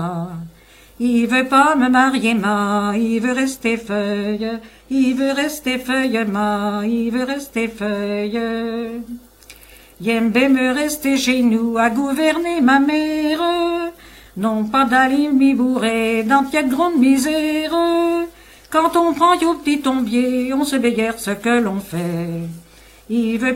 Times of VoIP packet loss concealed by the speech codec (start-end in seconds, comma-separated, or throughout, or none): none